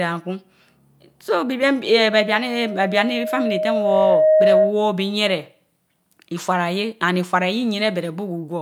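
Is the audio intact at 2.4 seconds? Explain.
No. At 2.4 s the clip is inside a loudspeaker feedback squeal that runs from 1.98 s to 4.91 s. A microphone is picking up the loudspeaker it feeds, and at 623 Hz the loop gain exceeds unity, so that frequency regenerates on every pass. At 2.4 s the tone is still building; it swells over roughly two seconds into a steady squeal sitting around 10 dB above the speech.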